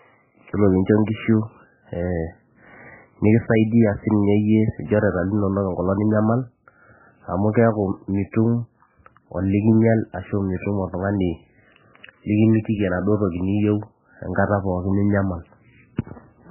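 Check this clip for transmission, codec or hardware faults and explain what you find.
One fault runs through the whole clip. Heavy MP3 compression. Nothing survives above 3 kHz. The speech sounds dull, watery and swirly. This likely comes from a very low bitrate near 8 kbps, forcing the encoder to cut treble and drop weak frequency lines.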